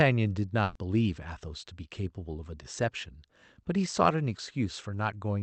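At 0.63 s the speech hits a burst of packet loss lasting about 120 ms, to 0.78 s. A run of packets never arrived in time, so the receiver filled the gap by extending the last sound and fading it down, which comes across as a brief smeared buzz or hiss. When audio resumes, roughly 120 ms of speech has been skipped. Above about 8 kHz the call codec's band limit removes the highest frequencies throughout.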